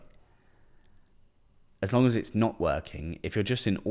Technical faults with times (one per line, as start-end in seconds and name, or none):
none